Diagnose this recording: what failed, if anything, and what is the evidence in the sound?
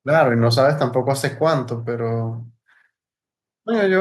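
Nothing failed; the speech recording shows no audible faults.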